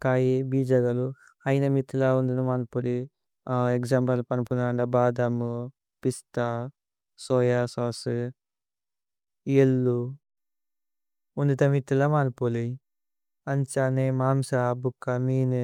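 No technical faults are audible.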